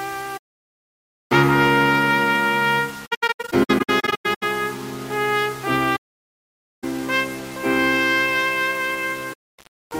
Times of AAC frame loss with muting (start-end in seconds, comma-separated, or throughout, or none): 0.37-0.90, 3.06-4.43, 5.95-6.84, 9.33-9.59